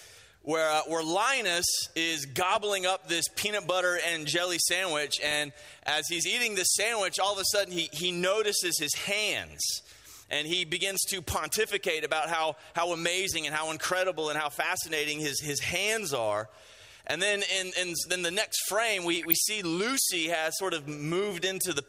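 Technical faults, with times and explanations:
5.23–5.35 s and 19.05–19.33 s, DAB burbling: bit errors corrupt MP2 sub-band samples, causing short noise blips that appear as blocky flashes in narrow spectrogram bands.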